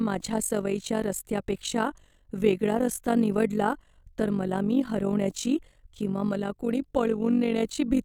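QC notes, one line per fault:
Throughout: overlap-add ripple, level pulses about 11 dB some 50 times a second as frames overlap unevenly, metallic buzz; waveform envelope scalloped, spectrogram vertically banded.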